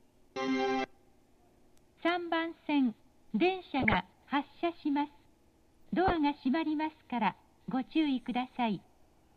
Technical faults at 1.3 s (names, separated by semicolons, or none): low bit depth without dither